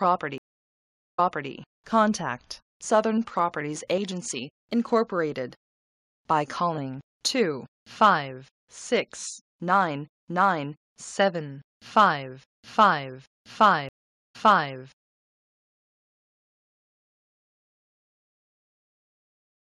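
The audio has two stream reconnects. From 0.38 to 1.51 s the connection drops, goes silent for about 0.79 s, then picks up 340 ms earlier than where it stopped, so you hear a bit repeated. That's the server resending a burst. At 13.89 s it happens again, with 414 ms of silence and the audio coming back around 0.4 s later, so a chunk is simply skipped. Both times the player starts a fresh decoder mid-stream, and you'll hear a fading first frame at each resume point.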